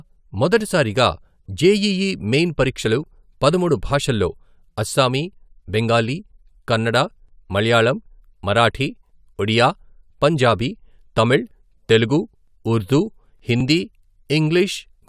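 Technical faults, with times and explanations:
No technical faults are audible anywhere in the speech recording.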